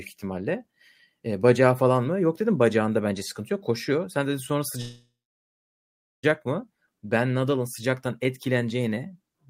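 A call audio freeze runs from 4.81 s to 6.25 s in this speech clip. The sound stalls, the last moment trails off as a fading buzz or hiss, and the rest, about 1.14 s, is silence. The likely cause is packets held up in transit, leaving the receiver's jitter buffer empty, so it stretched what it had and then went quiet. When delivery resumes, the speech picks up where it stopped. Nothing is lost, but everything after is pushed 1.42 s later.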